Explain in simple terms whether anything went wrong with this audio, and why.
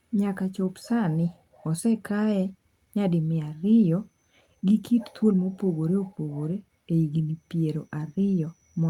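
Clock drift between sender and receiver is at work here: the sending device's clock runs about 5% fast, so the listening end keeps getting slightly more speech than it can play. Unlike a single network dropout, the problem never stops; it is present through the whole clip.

Because of that, there are repeated timing corrections from 0.41 s to 8.82 s. The receiver keeps trimming tiny pieces to keep up, so the speech runs at 105% pace with small, unevenly spaced hiccups, all skips rather than stutters or repeats.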